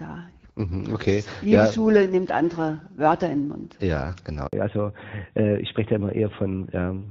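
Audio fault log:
4.47 to 4.53 s, handover gap: the sound fades out within a few tens of milliseconds and leaves a 60 ms hole of silence before the signal resumes. This is what happens when a call is passed from one network to another and no speech frames are delivered during the switch, so that stretch of audio is simply lost. On a waveform it shows as a short flat line. On a spectrogram it is a narrow vertical blank band across all frequencies.
4.53 s to end, fallback to narrowband: once the signal resumes after the gap, all content above 4 kHz is gone, and the sound becomes duller and rougher than the wideband audio before it. Until then, the HD Voice coding sounds clear with only light damage, which fits AMR-WB at around 12.65 kbit/s. The switch fits a drop to the older AMR-NB codec at about 12.2 kbit/s, which cannot carry that upper band. On a spectrogram, the energy above 4 kHz cuts off sharply at that point.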